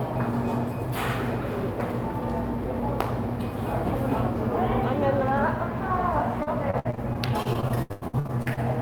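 From 6.43 to 8.59 s, repeated packet loss chops the sound. Lost packets, the longest gap 96 ms, are patched with repeated audio, giving a choppy, robotic texture.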